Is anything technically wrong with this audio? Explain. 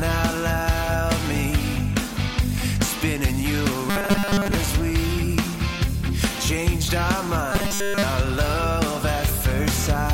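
Yes. From 3.90 to 4.55 s and 7.52 to 8.03 s there is robotic sound from repeated short buffers: a rigid, metallic 200 Hz buzz. Audio likely arrived too slowly, so the last 5 ms was looped in place of most of the first span and all of the second.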